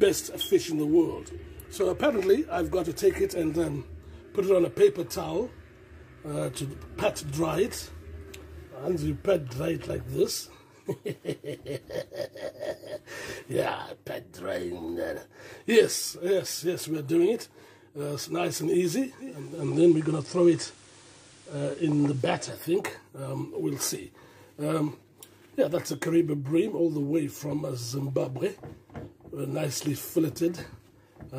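Around 19.17 s the audio does a digital radio blend to analogue: the receiver lost the digital stream and cross-faded over roughly half a second to the station's FM feed, so faint hiss creeps in and the level shifts by about 3 dB until it blends back at 22.67 s.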